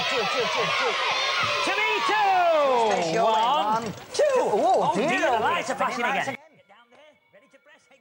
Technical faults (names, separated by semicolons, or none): one channel inverted